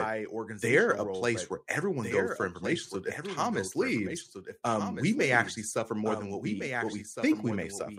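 A speech recording with a second, fainter copy of the same speech trailing the original by roughly a second and a half throughout, around 10 dB quieter, dry and full-band, with no room colour. This doubled audio track is likely a duplicate capture through a slower path, mixed back in out of step.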